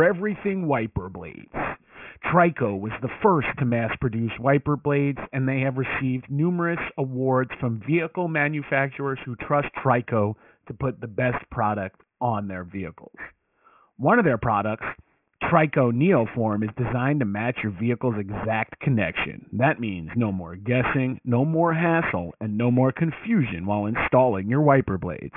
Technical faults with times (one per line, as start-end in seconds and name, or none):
0.00-25.36 aliasing